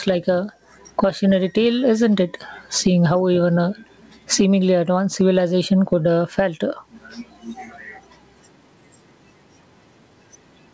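Gain pumping runs through the whole speech clip. The level swings by about 20 dB, squashing loud and soft passages toward one level. The likely cause is microphone gain set far too high, with a fast limiter clamping down on each peak. A waveform shows a flattened envelope. A spectrogram shows a spectrum that stops at 8 kHz, as expected from the call path's G.722 coding.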